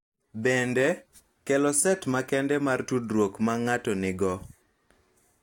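No technical faults can be heard anywhere in this speech recording. Nothing in the signal path gives reason for comment.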